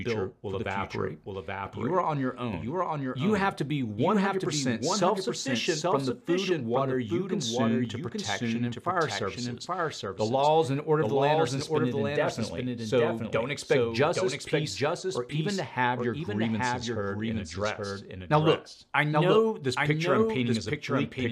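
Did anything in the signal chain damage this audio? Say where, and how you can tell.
Yes. A doubled audio track runs throughout: a dry copy trails roughly 0.7 s behind, about 5 dB quieter, likely from a slower second capture path.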